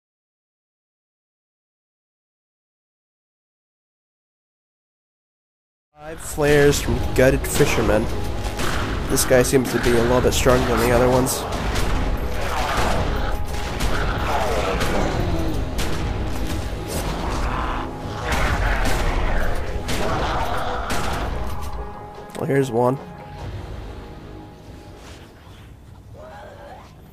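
No faults found; the level fades in smoothly from around 6 s to full level at 6.83 s, with no click or hard edge.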